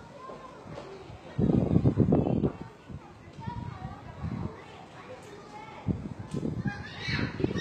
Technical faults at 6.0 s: HE-AAC compression

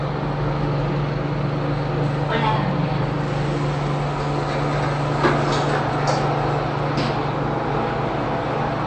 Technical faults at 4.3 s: MP3 compression

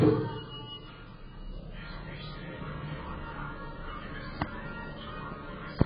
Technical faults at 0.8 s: AAC compression

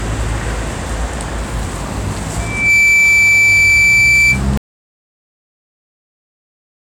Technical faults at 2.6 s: loudspeaker feedback squeal

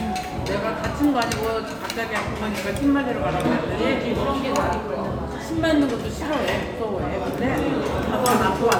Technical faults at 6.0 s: none

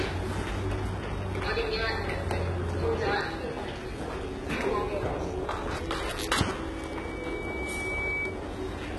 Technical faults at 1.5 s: HE-AAC compression

